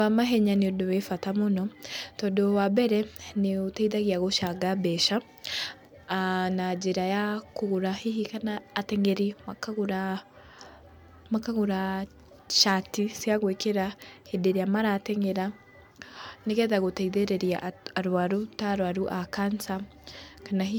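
Across the whole recording the speech has a swirly, hollow quality and softened consonant attacks, more smeared than a single encode would leave. This is generation loss, likely from the audio being passed through MP3 about four times, each pass re-quantising on a shifted frame grid so the errors pile up. The sound fits rates around 135 kbit/s. On a spectrogram, energy stops near 20.2 kHz, with patchy holes and blurred, flickering texture in the upper bands.

Hard clipping occurs twice, where peaks exceeded what a stage could pass and were sliced flat. At 2.78 s a brief overload of about 2 dB gives a crackle on the peak. From 12.57 to 12.74 s, just before "cia gwĩkĩra hĩndĩ ĩrĩa", an overdrive of about 7 dB produces a harsh, fuzzy crackle. The waveform shows squared-off flat tops, and the spectrogram shows bright vertical streaks of added harmonics running high up the spectrum.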